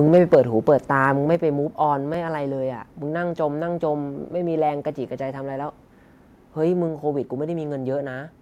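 Microphone overload runs from 0.13 to 0.35 s. The loudest peaks in this stretch of speech go about 4 dB past what the converter can represent, so their tops are flattened. That squared-off shape adds a harsh, gritty crackle to the strongest syllables, and a small share of the samples, a few percent, are pinned at the limit. The likely cause is an input gain set too high.

Microphone volume stepped down occurs twice, at 0.35 s and again at 1.35 s. The first step, about 3 dB, comes right as the overload ends. The second is deeper, about 5 dB. Each time, the speech and the background behind it drop together in one abrupt step. That pattern likely comes from the call software's automatic gain control cutting the microphone's input level after it found the microphone too loud or clipping.

Repeated buffer occurs at 2.14 s. A single chunk of about 10.7 ms, which fits a 512-sample buffer, is played once more because fresh audio did not arrive in time. 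The repeat is so short that it is heard as a brief click or buzz at the hard join rather than as a stutter. The replay fills the gap without dropping any of the speech.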